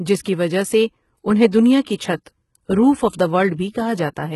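Throughout, the speech carries heavy codec damage, likely from HE-AAC compression at a low bitrate near 16 kbps. Only the lower band is truly coded, and the treble is rebuilt from copied lower bands. The result is false highs that stop at 11.8 kHz, with gritty, lispy s sounds.

Pre-echo appears at 1.51 s, from 1.84 to 1.87 s, and from 1.95 to 1.99 s. Each time, the quantisation noise sized for a sharp attack spreads across the whole block, into the quiet just before it. A short hiss of 11, 27 and 40 ms precedes each onset, softening and smearing it.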